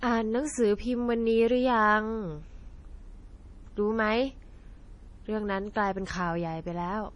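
MP3 compression damage runs through the whole speech clip: nothing sounds above 10.6 kHz, and weak frequency lines flicker on and off between frames, giving a watery, swirly texture with smeared attacks, and the damage is heavy. This likely comes from an MP3 encoder starved of bits, consistent with roughly 32 kbps.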